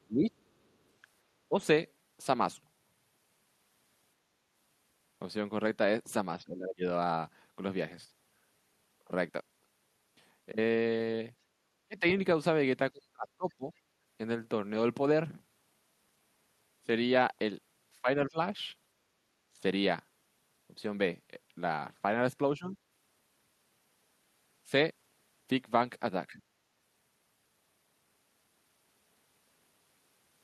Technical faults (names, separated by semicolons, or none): speech suppressed in double talk; other side's voice leaking through